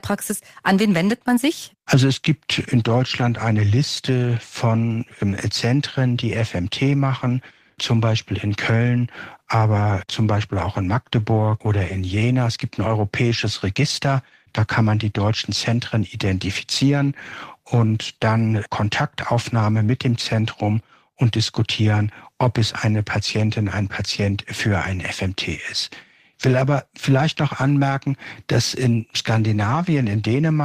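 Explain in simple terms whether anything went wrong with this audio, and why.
Nothing went wrong with this audio, as no fault can be heard anywhere in the recording.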